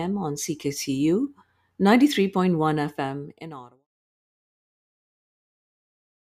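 No faults in this speech clip; the level eases out smoothly from around 2.5 s to 3.87 s, an editor's fade with no click or hard edge.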